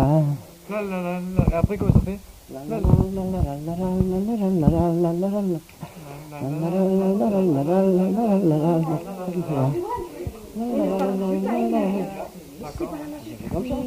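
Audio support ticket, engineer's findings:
Electrical switching spike at 10.99 s. Sharp snap or tight cluster of clicks, about 11 ms, riding on top of the sound, peak around -20 dBFS. Likely an arc from a nearby switch, motor or static discharge coupling into the audio line. Waveform: narrow isolated spike standing out from the surrounding envelope. Spectrogram: thin vertical broadband stripe spanning low to high frequencies, with no tail after it.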